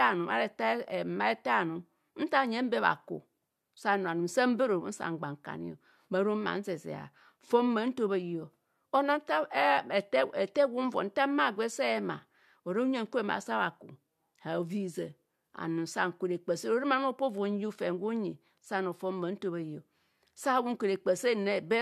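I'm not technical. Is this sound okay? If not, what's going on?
Yes, nothing wrong here.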